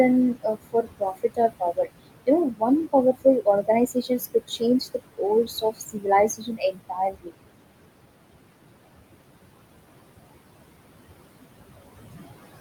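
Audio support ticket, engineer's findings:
Background room noise, about 12 dB under the speech, pumps down between phrases and swells under them. Noise suppressor artifacts: bands judged steady noise pulled down about 21 dB per frame.

Soft consonants and phrase endings swallowed at 0.34–1.87 s, 2.50–2.62 s, 3.94–4.62 s, 5.45–6.07 s and 6.37–7.31 s, dipping about 16–20 dB. Speech cut by the noise suppressor: it misread quiet speech as noise and attenuated it.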